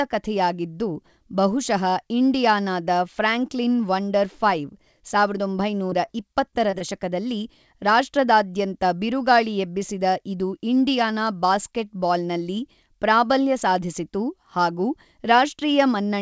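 Short concealed packet loss hits the speech at 5.90, 6.05, 6.51, 6.70 and 6.78 s. Each time about 20 ms of audio missed the decoder, so the receiver extended the preceding sound across the gap and faded back in, leaving a brief smear or wobble.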